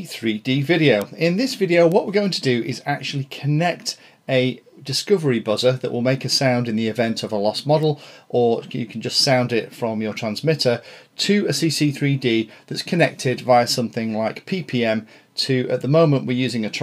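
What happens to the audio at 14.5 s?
At 14.5 s the audio plays through intact, with no dropout, click, distortion or other fault to be heard.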